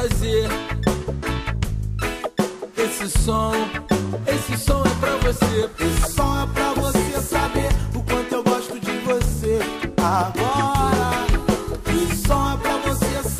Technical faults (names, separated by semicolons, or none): none